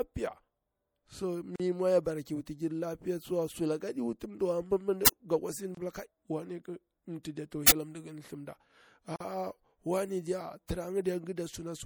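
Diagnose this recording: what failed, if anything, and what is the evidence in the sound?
Codec stage: watery, swirly speech with dulled treble throughout, likely MP3 compression at a low bitrate near 64 kbps. This is steady smearing, not momentary dropouts.

Codec or storage stage: a gap at a join of encoded pieces, with silences at 1.56–1.60 s (40 ms, before "mwa ya bara ki"), 5.75–5.77 s (25 ms) and 9.16–9.20 s (44 ms). Encoder delay and padding were left in, so the sound resumes where it stopped rather than skipping ahead.

Driver or buffer stage: an uninitialised buffer causes loud cracks or digital-noise bursts at 5.06–5.08 s (20 ms) and 7.68–7.72 s (40 ms), where leftover memory was played as samples. These are loud events rather than silences, unlike the gaps.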